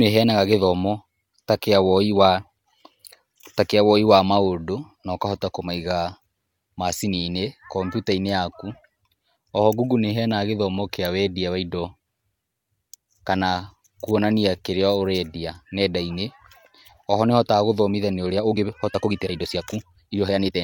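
From 18.26 s to the end at 20.64 s, the speech abruptly runs about 1.35 times faster while pitch stays unchanged, sounding rushed. This time-stretched section was likely squeezed by software dropping short segments to shorten it without shifting pitch.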